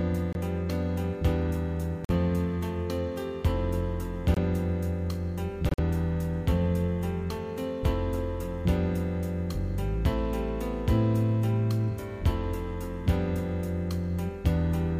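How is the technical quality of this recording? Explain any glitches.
Four brief dropouts break the recording, all of the corrupt frame muted kind. At 0.33 s, 2.05 s, 4.34 s and 5.69 s the sound cuts abruptly to silence for roughly 0.03, 0.06, 0.04 and 0.1 s, which fits one to four lost frames. Damaged compressed frames were rejected by the decoder and replaced with silence, so timing holds. A waveform shows flat gaps, and a spectrogram shows clean vertical blank strips.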